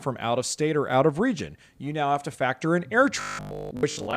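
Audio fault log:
3.21–4.17 s, robotic sound from repeated short buffers: fresh audio likely stopped reaching playback in time, so the gap was filled by looping a very short recent chunk while the real material was skipped. From just after "to factor in air" to the end, most of the stretch is these repeats. Their fixed period imposes a steady 50 Hz buzz, which fits a 20 ms loop, turning the speech into a rigid, metallic drone.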